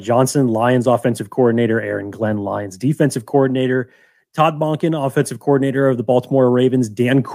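Nothing in the speech stood out as a technical fault on listening.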